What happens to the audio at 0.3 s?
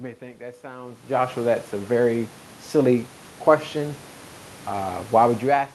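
At 0.3 s the speech comes through intact, with no dropout, glitch or other fault at that moment.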